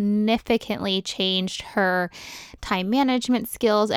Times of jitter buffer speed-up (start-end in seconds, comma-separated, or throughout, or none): none